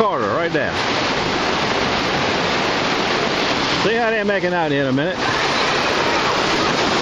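Nothing to flag: no dropouts, clicks, glitches or level problems anywhere in the audio.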